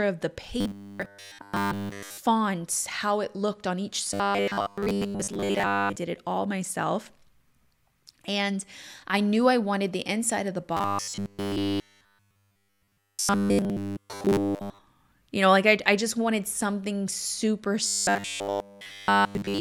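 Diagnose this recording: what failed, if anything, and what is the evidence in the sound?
Speech becomes a rigid metallic buzz fixed at 100 Hz: 0.61–2.18 s after "of the", 4.14–5.96 s between "it looked on each" and "it all myself", 10.77–14.79 s, and 17.87–19.60 s after "just wanted something super". This is robotic sound from repeated short buffers at the driver or buffer stage. Audio likely arrived too seldom, so a 10 ms block was replayed in place of the skipped audio.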